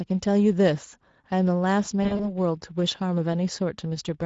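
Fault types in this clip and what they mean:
Speex codec: A CELP speech coder whose plainly audible damage, hoarse and noisy texture throughout, fits a mid-rate setting near 17 kbps.
VoIP packet loss concealed by the speech codec: From 2.03 to 2.33 s, the decoder fills about 100 ms of gaps, in runs up to 40 ms, with fading, extrapolated sound.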